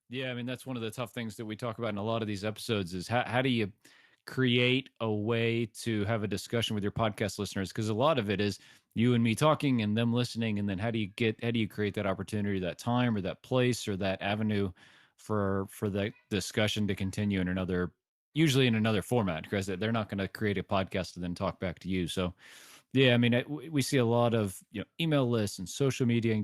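From 0.09 s to 14.15 s the level climbs steadily by about 11 dB, an automatic gain rising fault: the gain control judged the input too quiet and kept raising its gain. Speech and background noise swell together, so the noise floor grows along with the voice.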